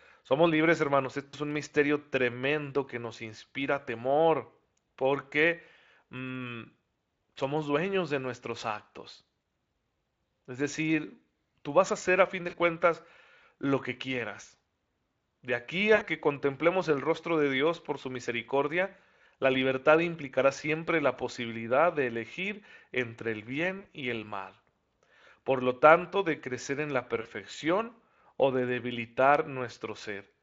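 VoIP packet loss concealed by the speech codec occurs six times. Packets drop out and the Speex decoder bridges each gap by extending its last pitch and filter at falling gain. This happens at 1.28–1.35 s between "libres hermanos" and "es un misterio", at 9.41 s after "dueños de nuestros actos", and at 12.49–12.55 s, 15.95–16.06 s, 23.79–23.86 s (between "de elegir entre el" and "y el mal"), and 27.21–27.27 s. The gaps last 20 to 60 ms, and each is heard as a brief buzzy tone or coloured noise that fades, with the voice staying weak or distorted for a moment after speech returns.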